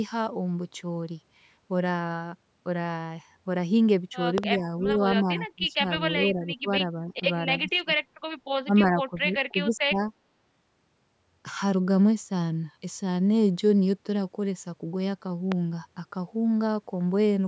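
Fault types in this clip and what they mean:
Loud pop: A sharp double pop at 4.38 s and a single one at 15.52 s, well above the speech. Likely a sudden voltage step or glitch.
Speech suppressed in double talk: Speech dips and breaks up in five stretches from 4.6 to 10.06 s, likely an echo canceller turning down both talkers at once.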